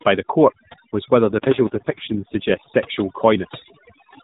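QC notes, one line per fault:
Throughout: overdone noise removal. The noise suppressor is set too aggressively, so individual frequency bands near its noise estimate are pulled far down or shut off entirely, and the quieter parts of the speech are removed along with them. Between phrases the background drops to near silence, broken by twinkling specks where stray bands briefly open. The speech sits inside the narrow mobile band that stops at 4 kHz.
1.20–2.73 s: AMR rate drop, starting just after "by the court was". The codec is pushed to a lower mode, most likely by the network reacting to a weak radio link and diverting bits to error protection. The sound points to a step from the 12.2 kbps mode down to 4.75 kbps. The bandwidth stays the same and nothing drops out, but with far fewer bits per frame the excitation is coarser. The speech turns rough and synthetic for about 1.5 s until the higher rate returns.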